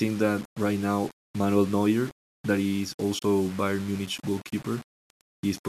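A speech recording with gritty, grainy distortion throughout that rises and falls with the voice, likely low bit depth without dither. The coarseness fits rounding to about 6 bits, with error roughly 20 dB below the speech. On a waveform this shows as visible stair-stepping, and on a spectrogram as broadband hash that follows the syllables rather than a steady noise floor. At 3.19 to 3.23 s a digital broadcast dropout mutes the sound for about 24 ms after an 8 ms fade, which fits a single lost frame. It appears as a short flat gap in the waveform and a clean vertical blank stripe across all frequencies on the spectrogram.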